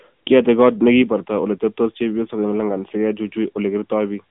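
Speech throughout sounds narrow, boxed-in and buzzy and synthetic, with nothing above 3.7 kHz and the band confined to 150 Hz to 3.5 kHz: AMR narrowband mobile codec damage, plainly audible, fitting a mid-rate mode near 10 kbps.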